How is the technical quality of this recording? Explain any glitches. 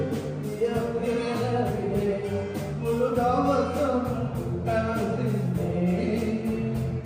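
No glitches or technical faults can be heard anywhere here.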